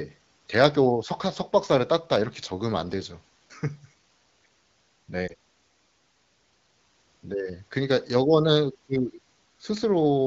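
From 5.27 to 5.34 s, a lost AMR speech frame is concealed by repeating the previous settings at falling gain. It is heard as a brief dip or warble and seen as a small dip in the waveform.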